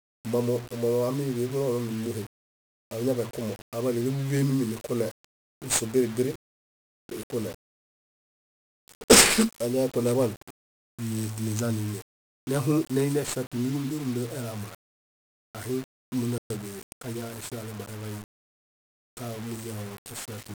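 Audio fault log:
Throughout: 1-bit DFPWM compression. The speech is coated in heavy fuzz and crackle, with the top end sunk under hiss. Each sample is just one up-or-down bit nudging an adaptive level, so the coarse steps leave loud broadband noise. The damage fits roughly a 48 kbps stream.
16.38–16.50 s: playback stall. The speech cuts out mid-flow for about 120 ms before picking up again. That's most likely the player running dry on data or its thread getting blocked, with the output left silent until it recovered.
16.50–17.30 s: time-compressed catch-up. Straight after the gap, the speech rushes at about 1.15x with its pitch unchanged. The player is clawing back its backlog by snipping out tiny slices and cross-fading over the joins.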